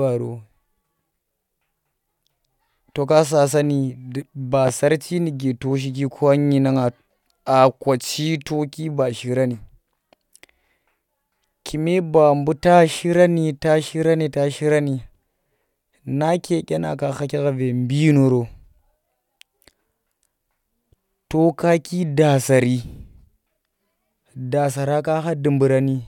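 A speech clip with a single loud pop at 4.68 to 4.71 s. It falls just after "ka sa sasani ba" and just before "sarchi nuke to shiki". It is one sharp, brief crack, roughly 10 dB louder than the speech around it. The speech continues underneath without a break. The cause is likely a sudden electrical jolt, such as a connector being moved, a switch, or a static discharge, adding a spike that the following circuitry briefly shapes into a thump.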